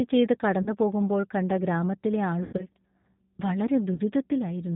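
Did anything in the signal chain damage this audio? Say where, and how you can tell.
Yes. At the codec stage, the whole speech clip runs through G.729A at 8 kbit/s. Nothing above 4 kHz survives, and the analysis-by-synthesis model, built from a vocal tract filter, a pitch predictor and sparse pulses, leaves a plainly audible rough, synthetic edge on every syllable.

On the network, VoIP packet loss concealed by the speech codec occurs three times. From 0.62 to 0.69 s and from 3.94 to 4.01 s, about 40 ms goes missing each time, which fits two lost 20 ms packets. Just after "കണ്ട ഗ്രാമത്തിലെ", from 2.43 to 2.66 s, 120 ms is lost across 160 ms, with one 100 ms run. The decoder keeps replaying its last pitch and filter at falling gain, so each gap turns into stretched, fading sound, and the speech stays thin for a moment after packets return.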